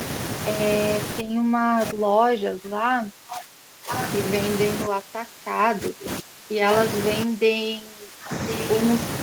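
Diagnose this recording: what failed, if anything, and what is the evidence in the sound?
The failure is in call processing. Speech suppressed in double talk appears from 1.21 to 3.91 s, 4.86 to 6.72 s and 7.24 to 8.32 s. The voice dips by up to about 20 dB, likely because the echo canceller attenuated the near talker while the far side spoke.

Echo leak shows as short returns from 3.91 to 4.07 s and 8.47 to 8.64 s. Each is a copy of the voice delayed by 1050 ms, about 10 dB below the speech. The likely cause is a loudspeaker-side echo canceller failing to fully remove its microphone pickup.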